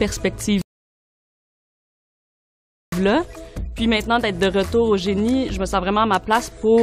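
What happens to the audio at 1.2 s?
At 1.2 s the audio is in the middle of a rebuffering stall that runs from 0.62 s to 2.93 s. The player has used up its downloaded audio and halts playback until more data arrives, so the sound drops to silence for about 2.3 s. When the buffer refills, the sound picks up exactly where it stopped. No material is skipped; the pause simply adds that 2.3 s to the running time.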